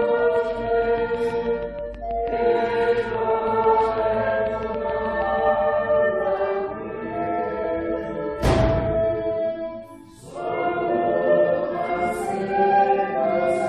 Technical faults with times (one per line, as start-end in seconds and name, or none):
0.02-5.40 train of clicks
2.31 compressed frames skipped
7.63 compressed frames skipped